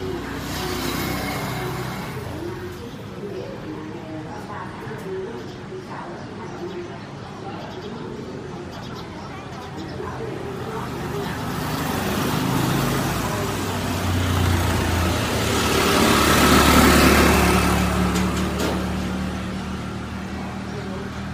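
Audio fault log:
No fault can be heard at any point, and the signal stays intact across the whole recording.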